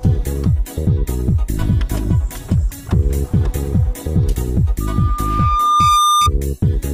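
At about 4.80 s a loudspeaker feedback squeal starts creeping in: a single tone at 1.2 kHz that swells over roughly a second until it sits about 5 dB above the rest of the sound, then cuts off at 6.30 s. What's happened is the mic is hearing the speaker it feeds, and at that one frequency the loop gain has crept past unity, so the tone keeps feeding itself and growing until the loop is broken.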